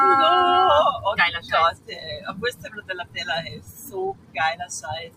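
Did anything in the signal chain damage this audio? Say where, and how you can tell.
Yes. A noise suppressor applied to music or sounds sits in the call-processing stage and stays active throughout. Sustained parts and tails are pushed down while onsets pass, so the level swings by roughly 20 dB. Unlike slow gain control, these swings follow each sound's decay.

The clearest cases of sound cut by the noise suppressor fall at 1.72–1.92 s, 2.26–3.16 s, 3.46–3.94 s and 4.13–4.36 s, with drops of about 14, 14, 12 and 15 dB. The sound sinks rather than vanishing outright, which separates this from a codec or network dropout.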